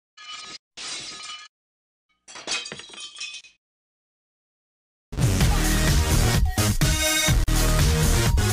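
At 3.41 s the sound drops out for about 30 ms, and at 7.44 s for about 40 ms: a gap at a join of encoded pieces, recurring every 4 s. Separately encoded segments were butted together with their encoder start delay and end padding left in, so silence sits at each seam before the sound resumes where it left off. On a waveform each gap is a flat line with near-vertical, slightly smeared edges; a spectrogram shows a thin blank column across all frequencies.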